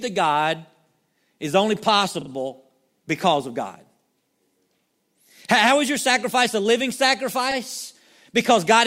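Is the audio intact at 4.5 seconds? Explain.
Yes, the audio is intact at 4.5 seconds, with no dropout, click, distortion or other fault audible at that point.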